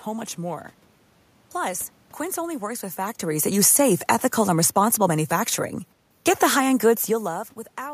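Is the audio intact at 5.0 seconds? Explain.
No. From 3.22 to 5.59 s, just after "only works with", the speech and its room background sink together by about 4 dB. This is automatic gain falling: the gain control judged the input too loud, or its background noise too strong, and eased its gain down gradually.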